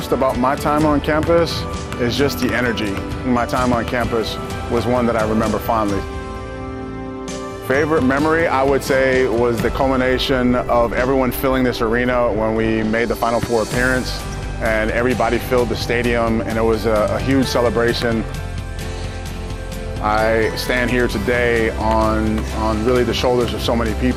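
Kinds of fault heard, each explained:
MP2 compression: The coder likely ran short of bits, so several of its 32 equal-width sub-bands were shut off and the remaining ones were coded with coarse steps. Throughout the clip the sound is plainly dulled, missing top end, with a gurgling, grainy edge as upper bands drop in and out. The amount of damage fits a rate of about 80 kbps for Layer II.
DAB burbling: At 10.63 s, a small number of transmission bit errors, on the order of a tenth of a percent, got past error correction and corrupted samples in the MP2 stream. Short blips of noise landed in individual sub-bands, which produces a few brief watery blips laid over the audio. The disturbance is very short and points to only a few damaged frames.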